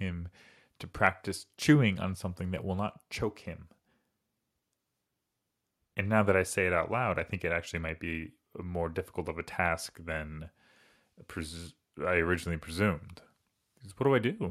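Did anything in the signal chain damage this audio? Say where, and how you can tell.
No, nothing in the signal chain damaged this audio.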